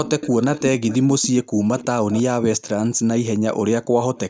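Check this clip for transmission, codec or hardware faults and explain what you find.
Two problems stand out in this speech: a leaking echo and a brief gating dip in the background.

Echo leak: There are delayed repeats of the speech at 0.05–0.62 s, 0.88–0.98 s, 1.78–1.86 s, 2.12–2.23 s and 4.15–4.19 s, trailing by about 325 ms. They sit between around 10 dB and roughly 25 dB under the speech. The likely cause is a far-end speakerphone whose echo canceller let some of its own playback slip back down the line.

Background gated by the echo canceller: At 1.44–1.55 s the room sound drops away by about 40 dB for roughly a tenth of a second, then comes straight back. The canceller clamped the microphone hard while the loudspeaker was active, and released it once playback eased.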